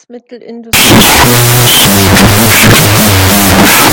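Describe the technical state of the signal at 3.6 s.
At 3.6 s the audio is inside a wrong sample width fault running from 0.73 s to the end: 16-bit integer data is being read as unsigned 8-bit, so every byte becomes its own sample. The speech plays at half speed, an octave low, buried in loud noise.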